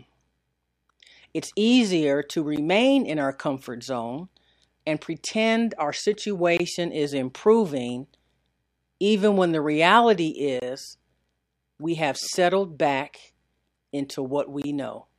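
At 2.56 s, 6.57–6.60 s, 10.60–10.62 s and 14.62–14.64 s, the speech drops out briefly at a gap at a join of encoded pieces. The gaps repeat every 4.0 s, around 12 ms for the first and 23 ms for the rest. The first falls between "easier to" and "in our comfort zone". Encoder start delay and final-frame padding were left in at each join, so each gap has smeared edges before the speech resumes.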